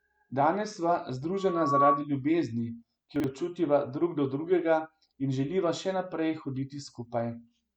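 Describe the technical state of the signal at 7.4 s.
At 7.4 s the speech signal is intact, with no audible fault at that moment.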